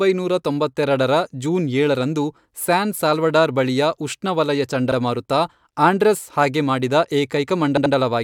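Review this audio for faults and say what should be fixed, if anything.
The speech has two repeated-frames stutters: a 42.7 ms block replays once at 4.91 s, and an 85.3 ms block plays twice more around 7.76 to 7.94 s, adding 170.7 ms, which fits short runs of compressed frames resent. Deduplicate frames by sequence number before decoding.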